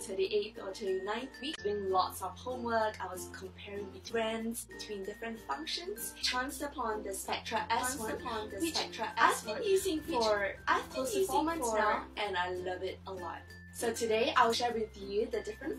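Damaged data in a compressed stream hits at 1.54 to 1.60 s, 4.04 to 4.11 s and 6.18 to 6.23 s. Corrupted frames make the decoder misread them and lose sync while it hunts for the next frame header, so each spot gives a short chirp or blip.

From 7.79 to 12.19 s there is a doubled audio track, likely from the same audio being captured again through a slower path. A full-band copy runs about a second and a half behind the original at about 5 dB lower. It has no decay or room colour, and it cuts in and out abruptly at those edges.

Damaged data in a compressed stream returns at 14.49 to 14.55 s as one more brief squawk where the decoder drops sync.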